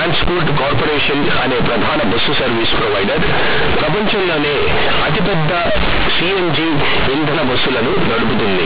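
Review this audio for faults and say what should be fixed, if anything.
Companded audio read as linear runs through the whole speech clip. Mu-law bytes play as raw 8-bit samples, so pauses roar and everything buzzes harshly. Decode mu-law to linear PCM before playback.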